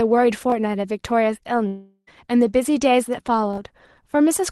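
Speech, with a likely long network dropout from 1.67 to 2.09 s. Audio stopped arriving for 0.4 s and was never played. The receiver stretched the last sound into a fading buzz, then left 50 ms of silence before speech resumes, with that stretch lost.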